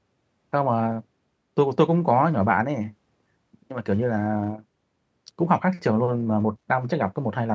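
Nothing technically wrong turns up in this speech clip; it has simply been through a call's microphone processing, so the lowest bass is trimmed and nothing reaches above 8 kHz, which is just how that path behaves.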